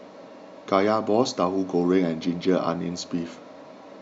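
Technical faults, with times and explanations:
No technical faults are audible.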